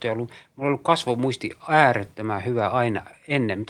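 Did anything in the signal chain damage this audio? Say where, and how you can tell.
No, nothing along the chain seems to have left a mark on this speech, so there's no stage to point to here.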